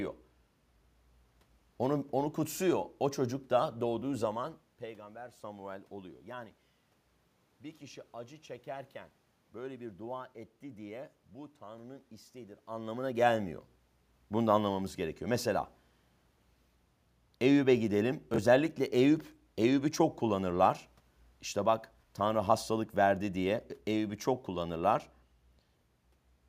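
At 18.34 to 18.38 s the speech jumps and garbles for an instant. This is chunks out of order. A 20 ms chunk of audio arrived one chunk late and was played after the chunk that should have followed it, so the two swap places across those 40 ms. Nothing is missing, but the waveform breaks at three hard joins. The level shifts near 4 and 12.5 s come from the talker moving relative to the microphone.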